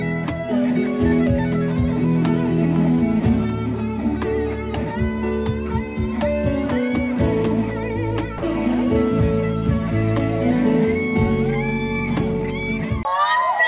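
A voice detector at the sending end likely judged a stretch of the signal to be background and stopped transmitting, so the receiver filled the gap with comfort noise. As a result, between 8.38 and 8.42 s the audio, band-limited to 4 kHz by the call path, drops out for 40 ms and is replaced by a brief patch of steady noise before it resumes.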